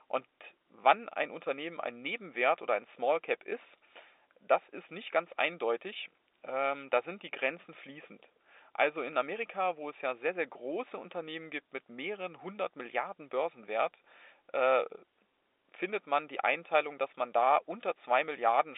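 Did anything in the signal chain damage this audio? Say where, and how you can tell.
No, nothing in the signal chain damaged this speech. What can be heard is ordinary G.711 telephone coding: the sound sits in a line band of roughly 300 Hz to 3.7 kHz with nothing above 3.8 kHz, which fits a 64 kbps mu-law telephone path working as designed.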